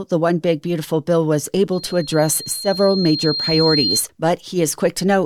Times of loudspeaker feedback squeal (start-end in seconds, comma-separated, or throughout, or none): 1.72-4.04